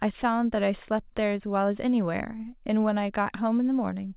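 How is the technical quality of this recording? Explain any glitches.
No glitches can be heard in this speech recording. It has passed through a call path that leaves nothing above 4 kHz, a narrowband sound that fits a telephone-grade codec such as G.711 A-law.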